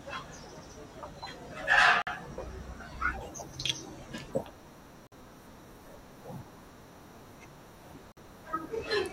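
Short hard-edged holes of silence interrupt the speech at 2.02 to 2.07 s, 5.07 to 5.12 s and 8.12 to 8.17 s, each 50 ms long. This is a gap between chunks: the audio arrived in 3-second chunks, and silence was left at each join.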